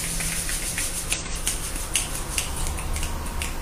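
Compressed frames skipped at 1.12 s and 2.56 s: the audio lurches forward by roughly a tenth, then a third of a second, where 46.4 ms frames are left out and the audio on either side rejoins.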